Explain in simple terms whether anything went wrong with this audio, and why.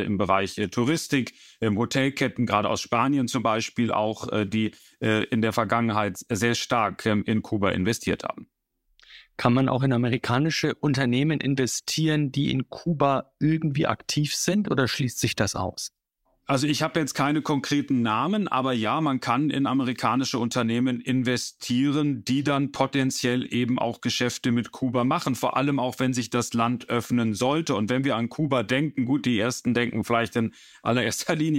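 Nothing went wrong here; the speech comes through steadily, with no glitches, dropouts or odd noises at any point.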